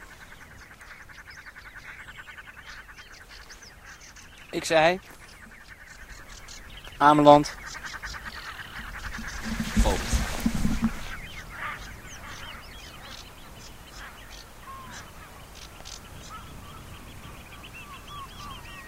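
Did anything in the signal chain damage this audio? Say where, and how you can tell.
Yes. At the codec or storage stage, repeated frames: one compressed block was written twice, so the decoder plays it again from 14.25 to 14.27 s. It's heard as a brief stutter, lengthening the sound by 21.3 ms, which fits a single frame.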